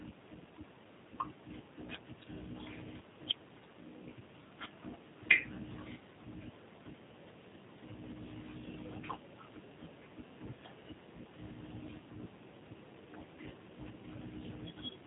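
Throughout, the speech passes through a G.729 codec running at a rate that fits its 8 kbit/s mode. It rebuilds each frame from a vocal tract model and a few pulses, so the voice sounds plainly rough and synthetic, with nothing above 3.8 kHz.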